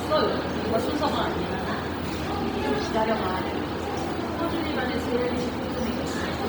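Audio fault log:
Throughout, Bluetooth LC3 compression: the sound carries a heavy breathy, grainy edge in its upper range, where detail turns to hiss-like texture, with nothing above about 20.3 kHz. This is likely LC3 coding at 32 kbps in 10 ms frames, which discards much of the upper spectrum and refills it with noise.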